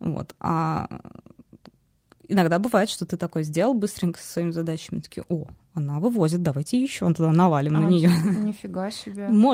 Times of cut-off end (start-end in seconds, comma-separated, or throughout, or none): none